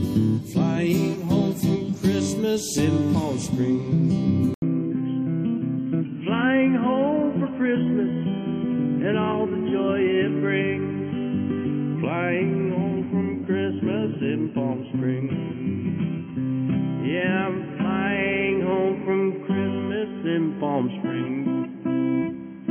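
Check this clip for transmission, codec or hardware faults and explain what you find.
One fault. From 4.54 s to the end, after an 80 ms gap, nothing above 3.2 kHz, quieter, new hiss: likely an input switched to a poorer device, not a codec bandwidth drop.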